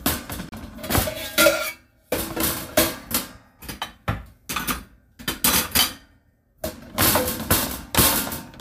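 At 0.49 s the sound cuts out and returns at 0.53 s, a short hole of a few tens of milliseconds. This is most likely a Bluetooth dropout: packets failed to arrive at the headphones in time, so the output fell silent, and playback resumed further along, as if the sound had carried on underneath. The gap fits two lost packets. On a waveform it shows as a flat line, and on a spectrogram as a narrow vertical blank band across all frequencies.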